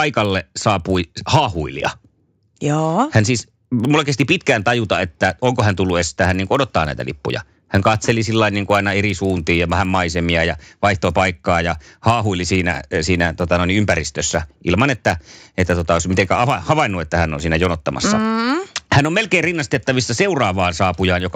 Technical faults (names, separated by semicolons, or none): resampler restarted on every block